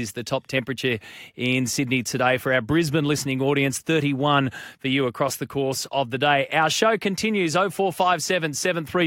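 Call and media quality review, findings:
Faint regular ticks, about every half second, from 0.39 s to 9.02 s, around twenty in all, clearest on louder speech. Clock slip clicks, likely from two unsynchronised device clocks differing by roughly 50 ppm, dropping or repeating single samples.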